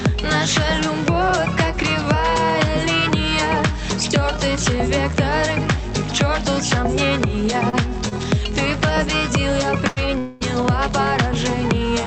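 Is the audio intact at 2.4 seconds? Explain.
Yes, the audio is intact at 2.4 seconds; there is no dropout, glitch or other fault at that moment, and the sound simply carries the ordinary coloration of the WebRTC call path it travelled through.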